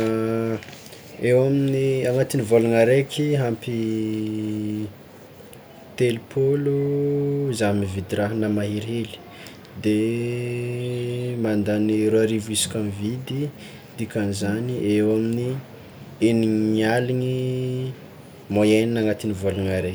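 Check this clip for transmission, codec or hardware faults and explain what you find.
Checking the clip turns up no faults to explain.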